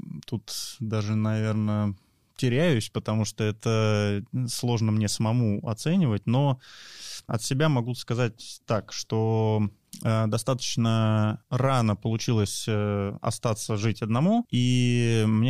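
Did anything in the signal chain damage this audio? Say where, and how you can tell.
No, nothing along the signal chain has audibly damaged this speech recording, and no stage from capture through playback has left a mark on it.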